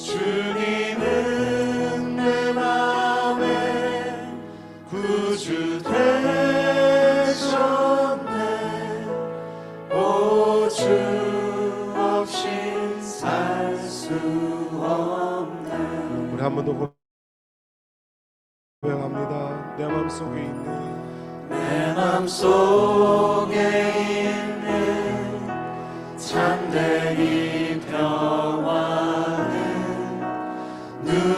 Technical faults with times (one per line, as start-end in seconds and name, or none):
16.85-18.85 call audio freeze
22.20-24.56 jitter buffer speed-up
27.24-28.40 jitter buffer speed-up